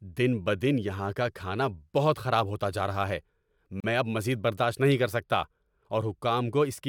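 At 3.80 to 3.84 s, separately encoded pieces of this speech were joined without trimming the encoder's start delay and end padding, leaving a gap at a join of encoded pieces: about 37 ms of silence, smeared at its edges, before "میں اب مزید برداشت" resumes, consistent with pieces about 4.0 s long.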